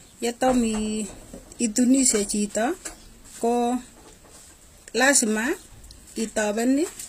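HE-AAC compression runs throughout: the treble is likely rebuilt by band replication from lower bands, nothing above 15.5 kHz, leaving s sounds gritty and metallic, consistent with about 24 kbps.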